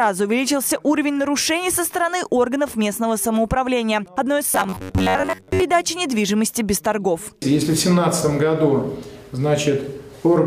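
Robotic sound from repeated short buffers, 4.5 to 5.63 s: a metallic 93.8 Hz buzz, likely from an 11 ms buffer replayed over most incoming audio.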